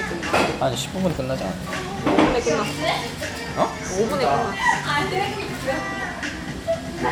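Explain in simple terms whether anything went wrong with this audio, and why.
Nothing went wrong here: the audio plays through cleanly, with no dropouts, distortion or glitches anywhere in the recording.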